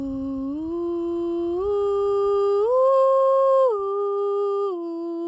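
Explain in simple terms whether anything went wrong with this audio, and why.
Nothing went wrong with this music: it passed through a call's microphone processing, which trims the lowest bass and leaves nothing above 8 kHz, and that is normal for a call.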